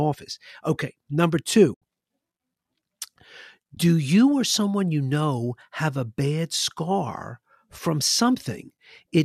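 AAC frame loss with muting breaks this speech recording at 1.74 to 1.82 s and again at 3.75 to 3.77 s. The decoder zeroes the missing frames, and overlapping windows fade the sound out and back in, leaving soft-edged holes of 80 ms and 20 ms. These fit eight and two 10 ms frames of a low-delay AAC stream, likely AAC-ELD, whose light coding roughness sits underneath.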